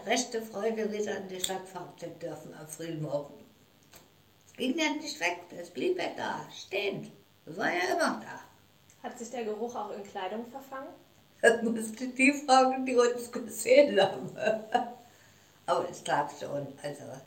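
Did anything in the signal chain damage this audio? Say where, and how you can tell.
Yes. There's mains buzz in the analogue wiring, running through the whole clip at roughly 35 dB under the signal. Its rasp points to spiky interference from a dimmer, rectifier or bad shield, giving 50 Hz harmonics climbing well into the kHz range.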